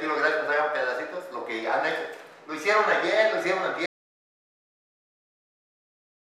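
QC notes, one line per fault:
3.86 s to end: audio dropout to silence. The sound stops abruptly mid-flow at 3.86 s and never returns, leaving about 2.4 s of dead digital silence with no room tone or noise floor underneath, so the gap feels like a hard cut rather than a quiet passage. The likely cause is that the input was lost, through a disconnected device, a dropped link or an accidental mute, while the recorder kept writing silence, so whatever followed is missing.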